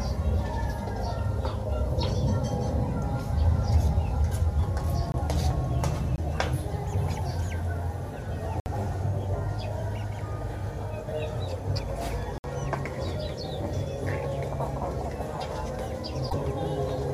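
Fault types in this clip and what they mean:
Block of digital silence: at 5.12 s and 6.16 s for 20 ms each, and at 8.6 s and 12.38 s for 60 ms each. Each time, a run of samples was written as zeros, most likely because the output buffer was not filled in time. The audio drops straight to dead silence and straight back with no fade.
Damaged data in a compressed stream: from 16.26 s to 16.33 s, roughly 70 ms. A stretch of the encoded stream is corrupt, so the decoder cannot read those frames correctly and loses its place until it finds the next valid frame header. While it resynchronises, the sound is briefly disrupted.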